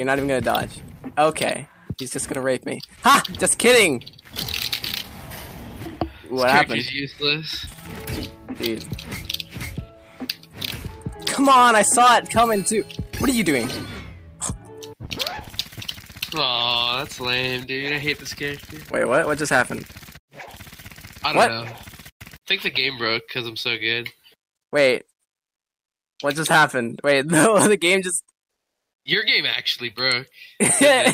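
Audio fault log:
25.41–26.19 s, comfort noise in place of the background: For about 0.78 s, the real background vanishes into a steady, featureless hiss roughly 26 dB quieter, likely because discontinuous transmission stopped sending during a pause and the receiver filled the gap with synthetic noise shaped only approximately like the original.
26.17 s, onset clipped by the voice detector: The returning sound begins abruptly, with its soft first 20 ms missing and replaced by comfort noise, likely because the sender's voice detector reacted slowly to the restart and never transmitted those opening moments.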